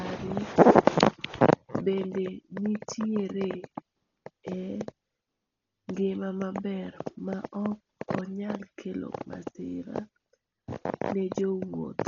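Speech, damaged throughout by heavy codec artefacts. Nothing is heard above 7 kHz, so it sounds dull. A rough, fluttering noise clings to the voice. This is likely Dolby Digital compression at a very low bitrate, one that fits about 32 kbps.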